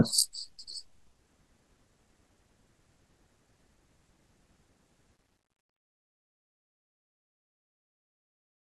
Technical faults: truncation distortion on a fade

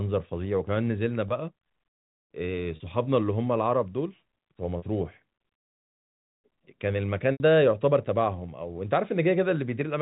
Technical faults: packet loss with pitch repetition

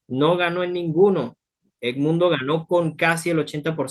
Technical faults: none

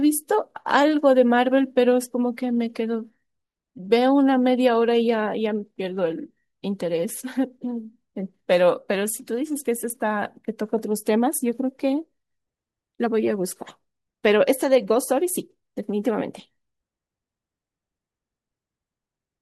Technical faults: none

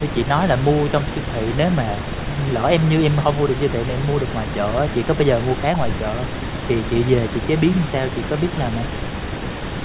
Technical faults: none

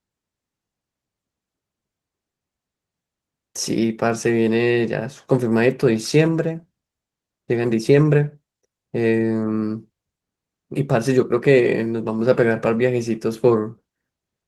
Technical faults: none

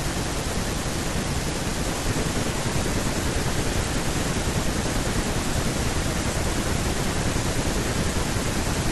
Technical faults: none

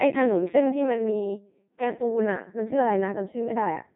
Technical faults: Codec 2 vocoder

